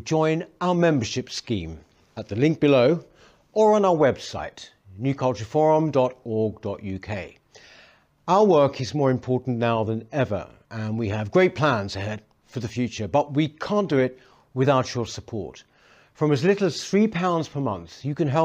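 No technical faults can be heard anywhere in this speech recording. There is no moment in the audio that calls for a timestamp or a closer look.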